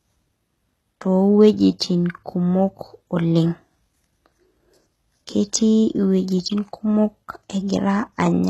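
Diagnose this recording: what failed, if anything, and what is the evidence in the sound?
The codec stage failed. The speech has nothing above 12.3 kHz, and the top band sounds synthetic and metallic throughout, with gritty, lispy s sounds. This is likely HE-AAC compression at a very low bitrate. The treble is rebuilt from copied lower bands, so harmonics misalign.

Pre-echo appears at 1.79 s, also from the codec. A short hiss spreads about 15 ms ahead of a sharp attack, blurring its onset. The transform block spreads its quantisation noise evenly, so noise sized for the loud attack leaks into the quiet gap before it.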